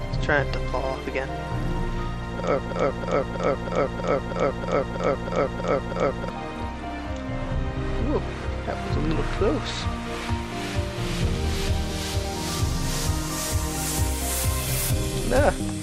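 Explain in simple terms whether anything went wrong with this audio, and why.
A broken-record loop runs from about 2.59 to 6.29 seconds: one short piece of sound, about a third of a second long, repeats twelve times back to back. The likely cause is a playback or streaming stall that kept resending its last fragment, so the real audio for that stretch is lost.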